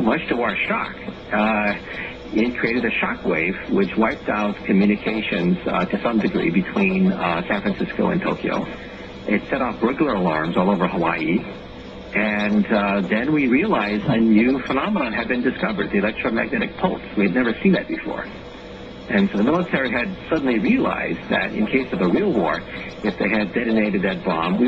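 At 14.77 s the digital radio blends to analogue, here the station's AM broadcast. Over roughly half a second the sound loses its top end, and a faint hiss, around 40 dB down, rises beneath it at unchanged level. On a spectrogram the upper band empties to a flat ceiling and a noise floor appears. The waveform's envelope stays steady. The receiver blends back to digital at 18.20 s.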